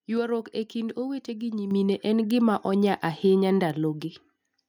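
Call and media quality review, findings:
Bit error spike, 1.25 s, just after "e kind": single corrupted sample in memory or on the digital link. One flipped bit throws the value off by a power of two for one sample, then it snaps back, giving a sharp broadband tick unrelated to the audio.
Bit error spike, 2.31 s: same single-sample flip, same isolated click.
Bit error spike, 3.70 s: same again.

Microphone volume stepped up, 1.71 to 1.72 s, just before "en gima": call software's input gain control judged the mic too quiet and raised device input volume in one step of about 7 dB. Speech and room noise jump louder together, abruptly, with no fade. Probable component: automatic mic level adjustment in the client.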